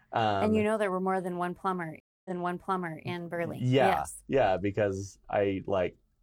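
At 2.0 s the speech drops out for about a quarter of a second (249 ms): a stream reconnect. The connection failed, the player fell silent, then reconnected and began decoding afresh mid-stream. When sound returns it has jumped back 789 ms, so the last stretch of speech is heard again, entering muted or faded in, and the fault ends at 3.04 s. A waveform shows a flat gap and a soft restart; a spectrogram shows a blank vertical band and repeated patterns.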